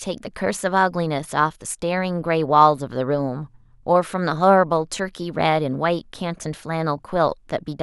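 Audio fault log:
No fault can be heard in this speech recording. Nothing in it calls for an entry in this log.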